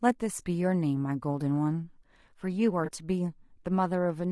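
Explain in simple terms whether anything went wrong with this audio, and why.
The speech was squeezed through what is likely low-delay AAC compression, the kind used for video calls, which leaves it noticeably rough and grainy throughout. From 2.85 to 2.91 s, AAC frame loss with concealment occurs: one piece of the stream went missing and the decoder guessed at it, leaving a brief smeared, noisy blur.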